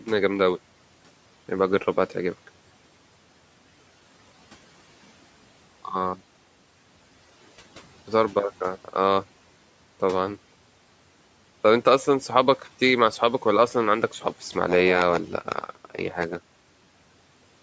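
From 14.1 s to the end there's a block size mismatch, padded: short blocks get zero-filled to fit what looks like a 512-sample buffer, giving a 93.8 Hz buzz and speech slowed to 0.938 speed at roughly normal pitch. Inside that stretch, between 15.41 and 15.97 s, speech is cut by the noise suppressor, dipping about 11 dB so around a tenth of a second of sound comes out swallowed.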